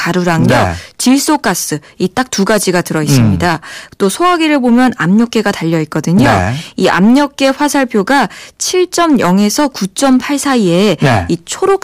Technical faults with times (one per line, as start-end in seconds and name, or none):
0.00-11.83 hard clipping